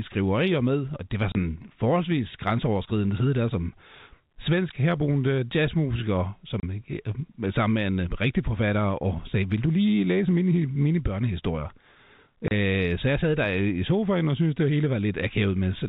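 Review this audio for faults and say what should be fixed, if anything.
Packet loss filled with silence punches 30 ms gaps at 1.32 s (after "med og det var"), 6.6 s (after "svensk herboende jazzmusiker") and 12.48 s (before "så jeg sad der"). Each gap fits a single dropped packet and shows as a flat waveform segment and a blank vertical stripe with hard edges. The narrowband telephone coding, with nothing above 4 kHz, is heard throughout the rest of the speech. Enabling packet loss concealment and a jitter buffer at the receiver would fill such gaps instead of playing silence.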